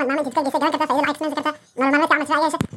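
From start to finish the speech runs at double speed and an octave high. The audio was read two samples at a time.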